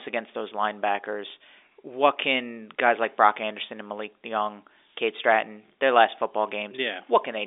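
No technical faults can be heard in this speech recording, which has the narrow band of G.711 telephone coding, with content held to about 300 Hz to 3.6 kHz and nothing present above 3.7 kHz.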